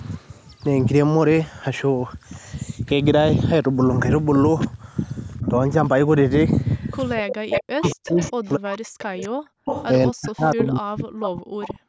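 At 5.42 to 5.48 s an echo leak appears, most likely because a loudspeaker-side echo canceller let part of its microphone pickup through and sent it back. The result is a faint delayed copy of the speech, about 35 dB below it and arriving some 234 ms late, just a brief scrap. From 6.6 to 9.87 s the leak returns much louder, at about 10 dB under the speech with a delay near 246 ms, giving a sustained doubling of the talker.

Starting at 7.16 s and continuing to the end of the clip, speech is suppressed in double talk. The echo canceller, likely unable to separate the local talker from the returning echo while both were active, turned the whole signal down. The talker's level dips repeatedly, at worst by around 40 dB, so the speech is cut into pieces across roughly three seconds in total.

Two further echo leaks fall inside that stretch. A short one at 10.64 to 10.68 s arrives about 257 ms late. 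A longer one at 11.22 to 11.74 s arrives about 261 ms late. Both sit about 10 dB under the speech, and their slowly growing delay makes the echo trail slightly further behind each time.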